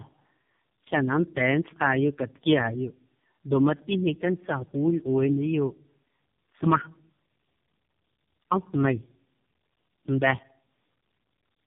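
Speech, damaged by tandem speech coding: it was decoded and re-coded through what sounds like three low-rate speech codecs in succession, leaving the whole clip rough, warbly and muffled, with nothing above 3.7 kHz.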